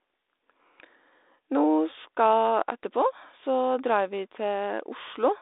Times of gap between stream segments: none

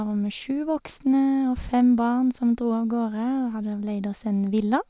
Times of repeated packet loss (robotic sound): none

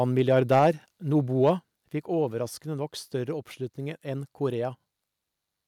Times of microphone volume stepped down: 0.59, 1.59

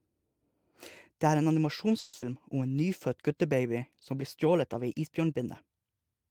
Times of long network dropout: 1.99-2.25

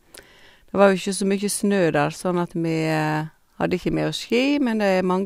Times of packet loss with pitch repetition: none

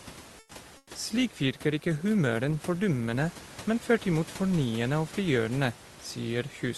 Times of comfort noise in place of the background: 0.39-0.51, 0.77-0.89

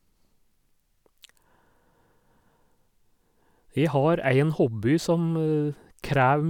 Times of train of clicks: none

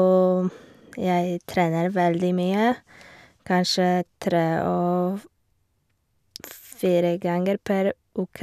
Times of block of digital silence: none

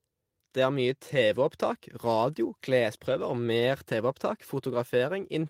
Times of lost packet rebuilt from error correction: 3.05-3.11

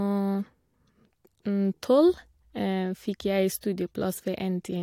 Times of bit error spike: none

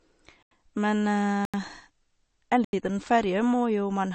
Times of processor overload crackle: none

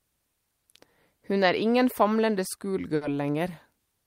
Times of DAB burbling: none

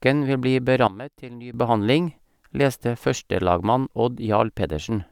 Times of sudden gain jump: 0.87-1.54

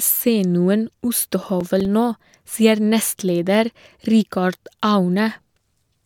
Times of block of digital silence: none

